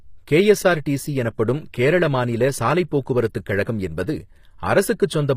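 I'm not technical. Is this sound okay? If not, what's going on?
No. Throughout, the s sounds and crisp treble in this speech come out gritty and metallic. That's likely HE-AAC compression rebuilding the treble instead of keeping the real thing.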